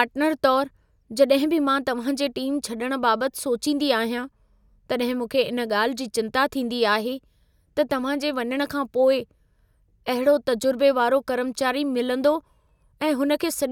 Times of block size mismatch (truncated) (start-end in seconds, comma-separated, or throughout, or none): 8.43-9.24